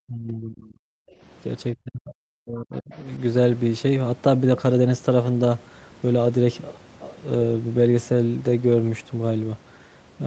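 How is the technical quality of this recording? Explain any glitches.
The recording has echo-canceller artefacts in its first three seconds. The audio is band-limited to 8 kHz, consistent with a wideband Opus call path at around 40 kbps.

Speech suppressed in double talk occurs at 0.01–0.79 s and again at 1.74–2.94 s. The speech dips sharply, by roughly 30 dB in the first stretch and roughly 40 dB in the second, which loses close to a full second. The likely cause is both call sides talking simultaneously: the echo canceller could not tell the local talker from loudspeaker echo and attenuated everything.

Background gated by the echo canceller occurs at 1.07–1.21 s. The room tone drops by about 16 dB for roughly 150 ms, then recovers. While far-end audio was playing through the loudspeaker, the canceller's suppressor clamped down on the microphone signal. This pulled the ambient background down with it, producing a brief hole in the noise floor that fills back in once the suppressor releases.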